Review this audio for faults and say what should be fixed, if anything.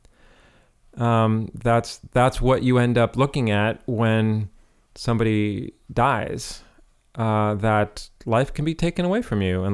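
Nothing stood out on listening, so there is nothing here to fix.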